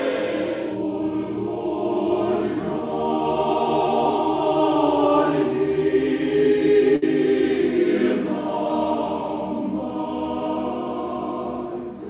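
A packet arrived late, the jitter buffer ran dry, and the receiver covered the gap by stretching the last sound until the packet turned up. The result is a short stall from a late packet between 6.96 and 7.04 s. For about 62 ms the sound holds in place, then resumes exactly where it left off. Nothing is lost, but everything after this point runs about 62 ms later. The narrow band throughout, with nothing above 4 kHz, comes from the call path and fits G.711 mu-law at 64 kbps.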